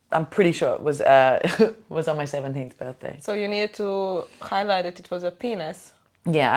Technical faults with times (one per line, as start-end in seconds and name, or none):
1.37-1.39 lost packet rebuilt from error correction